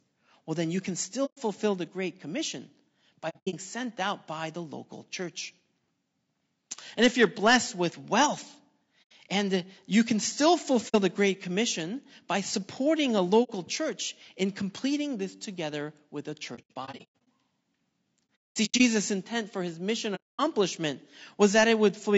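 Right through the clip the speech sounds rough and grainy, with noise filling the gaps between harmonics, likely low-delay AAC compression at a bitrate around 32 kbps. Then there's AAC frame loss with muting: soft-edged, faded holes at 1.25 s after "then you can", 3.29 s, 9.02 s, 10.88 s after "and you can still", 13.43 s, 16.55 s after "this together with a", 18.36 s and 20.15 s. The ones at 3.29 s, 16.55 s and 18.36 s stutter across several gaps.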